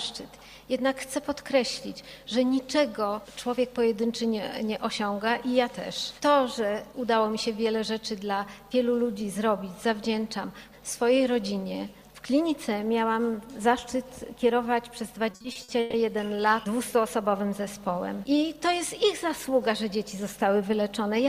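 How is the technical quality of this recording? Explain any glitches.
There is one glitch, a burst of repeated stalls (stutter) from 15.31 to 15.95 s. Six stretched holds totalling 300 ms, the longest 130 ms, fill almost half that span as late packets starve the jitter buffer. Unlike dropouts, nothing goes silent or missing; the sound drags and stutters.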